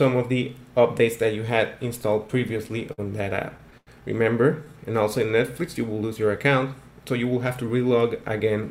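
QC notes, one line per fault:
2.27–3.00 s and 3.36–3.89 s, repeated stalls (stutter): the audio hitches 7 times in the first run and 5 in the second. Packets arrived later than playback needed them, so the jitter buffer kept running dry. Each time, the receiver extended the last sound until data resumed: 105 ms in the first run, longest pause 53 ms, and 128 ms in the second, longest 91 ms, about a quarter of that span. Nothing is lost, but the sound drags and stammers.
4.73–5.53 s, jitter buffer slow-down: playback runs at 90% speed with unchanged pitch, so sounds come out stretched and drawn out. The buffer was low, so the receiver built up a reserve by repeating single pitch periods and fragments of pauses many times over. That adds 88 ms of audio across the span, which is heard as a slower pace rather than as any gap or click.
7.53–8.48 s, jitter buffer speed-up: the audio runs at 111% speed with pitch unchanged, giving a hurried, clipped pace. 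The buffer held more than its target, so the receiver trimmed the excess by cutting out short pieces of one or a few pitch periods in quick succession. Roughly a tenth of a second disappears this way, which is heard as faster delivery rather than as a dropout.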